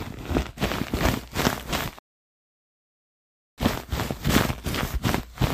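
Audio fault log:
1.70, 3.75 and 4.64 s: dropped buffer (overrun). The sound jumps ahead, skipping roughly 10, 10 and 30 ms, likely because samples were overwritten before being read.
1.99 to 3.58 s: rebuffering stall. Playback cuts to silence for 1.59 s as the player waits for data, then resumes exactly where it stopped.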